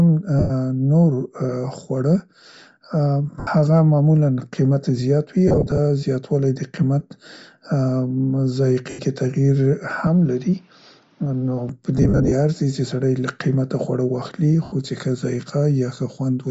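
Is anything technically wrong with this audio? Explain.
Yes, three kinds of fault can be heard.

Bluetooth LC3 compression runs through the whole speech clip. The transform codec discards much of the upper spectrum at a low rate and fills the gaps with noise, so consonants and the top of the voice carry a breathy, grainy edge. The damage is plainly audible and points to a setting around 32 kbps with 10 ms frames, which would likely make this an LE Audio link.

Lost LE Audio frames break the sound at 0.39–0.51 s (110 ms), 3.40–3.47 s (70 ms), 5.48–5.79 s, 8.90–8.99 s (90 ms), 11.98–12.33 s and 14.64–14.72 s (80 ms). At 5.48 s, 160 ms is lost in short runs of at most about 30 ms spread over 300 ms. At 11.98 s, 200 ms is lost in runs of up to about 50 ms across 340 ms. In each gap the decoder repeats the last spectrum with scrambled signs, so the voice turns into a brief noisy smear.

An input switched to a poorer device covers 10.07–11.69 s, likely a change to another microphone or a headset call profile. 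There is no silence at the changeover. The band stops at 6.7 kHz, which dulls the sound, the level drops by about 5 dB, and a new noise floor appears about 35 dB below the signal. The fuller sound returns at 11.69 s.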